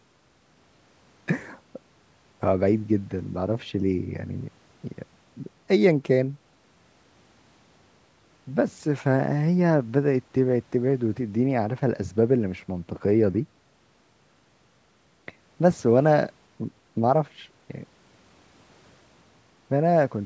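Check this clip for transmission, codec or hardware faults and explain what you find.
No transmission, codec or hardware faults turn up; the speech has passed through a call's microphone processing, so it carries nothing above 8 kHz and the lowest bass is trimmed by that path's high-pass filter, both normal for a call.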